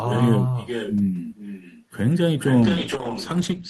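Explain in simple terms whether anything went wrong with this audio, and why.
Two things went wrong. First, echo with no canceller: the far end played the call through a loudspeaker, its microphone picked that up, and nothing removed it. So throughout the clip, the speech is followed about half a second later by a quieter, thinner copy of itself.

Second, a call bitrate drop at 2.63 s: the connection's capacity estimate fell, so the encoder was told to squeeze the sound into far less data until the end. From that point the speech sounds rougher and more muffled, with the crisp upper sounds above about 8 kHz cut away.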